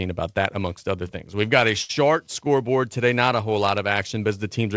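A short stall from a late packet occurs at 1.82 to 1.91 s, right after "got a" and before "scoreboard today not a". A packet arrived late, the jitter buffer emptied, and the receiver filled the gap by stretching the last sound for 72 ms, then resumed from the same point. Nothing is lost, but the sound there is held unnaturally long with a faint buzz or dip, and everything after it lands 72 ms later. The call path above it has no content above 8 kHz, which fits the G.722 codec at 64 kbps.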